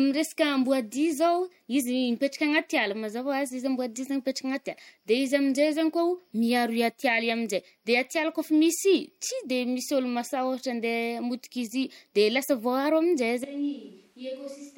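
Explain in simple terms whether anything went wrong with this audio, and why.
At 13.44 s the recording likely makes a switch to a distant microphone, as if the close microphone stopped and one farther away took over. From there to the end, the speech turns suddenly hollow and roomy, thinner in the bass, noticeably quieter, with faint room noise behind it.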